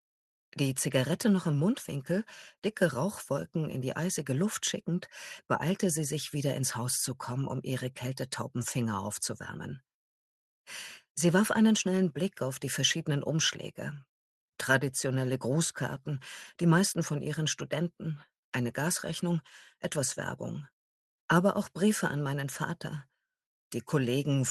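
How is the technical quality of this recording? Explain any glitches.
No glitches or faults can be heard here.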